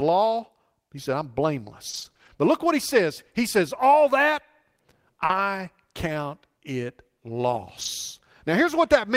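From 1.89 to 2.31 s, packets kept arriving lost or late, causing repeated packet loss (robotic sound). The decoder patched each hole by extending the preceding sound, the longest gap lasting 40 ms, so a quarter of this speech stretch is filler. It comes out choppy, with pieces missing.

At 5.25 s, a 40 ms short concealed packet loss occurs: that audio never reached the decoder in time, so the last sound was continued and then blended back, leaving a brief smear where the speech briefly wobbles.

Overlapping it, from 5.29 to 5.39 s, and again from 7.81 to 7.87 s, lost packets were rebuilt from error correction, using low-bitrate copies carried in the following packets. There is no gap, but these 60 ms and 40 ms stretches sound rougher and noisier than the surrounding audio.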